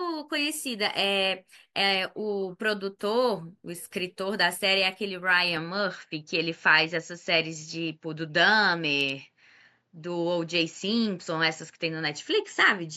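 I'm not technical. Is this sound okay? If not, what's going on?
No. From about 5.57 s to the end, the speech suddenly sounds duller, with nothing above 7.6 kHz and a faint new background noise. This likely comes from the input switching to a poorer device. A new device, not simple muffling, brings its own background noise, and here it swaps in without a gap or volume jump.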